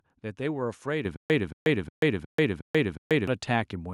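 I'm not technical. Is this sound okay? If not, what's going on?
No. At 1.05 s there is a microphone volume step-up: the voice and the background noise suddenly get louder together, in an instant. That is what separates it from someone simply speaking up, where the background would stay where it was.

From 1.16 s to 3.28 s there is a stutter with silent gaps. The same fragment of about 225 ms plays six times, each followed by about 137 ms of dead silence, so it returns every 362 ms. The likely cause is a stream stalling and retrying. Unlike ordinary dropouts, the same fragment repeats, and the sound that should have filled that time is lost.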